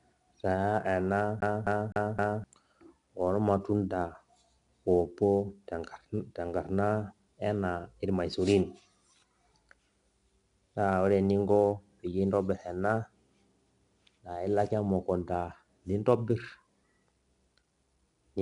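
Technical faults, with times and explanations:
Throughout, 4-bit ADPCM compression: A gritty hiss rides on the speech and swells with every loud syllable, and sharp onsets come out rough and distorted. The codec damage is plainly audible. Each sample is coded as a 4-bit step from a predicted value, with a step size that adapts as it goes. The error therefore tracks the signal's level, and the step cannot grow fast enough on sudden attacks. Nothing is present above 10.7 kHz, which points to a sample rate near 22 kHz and a dulled top end.
1.40 to 2.44 s, CD stuck on one turn: The speech stutters quickly and evenly, with the same 0.26 s fragment repeating four times and a brief mute at each restart. This is the classic skipping-CD sound. A scratch knocks the laser back one track at the same point on each rotation, so it keeps replaying the audio stored on that single turn of the disc until it breaks free and playback moves on.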